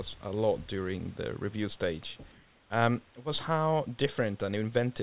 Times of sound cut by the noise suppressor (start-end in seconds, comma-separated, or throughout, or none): none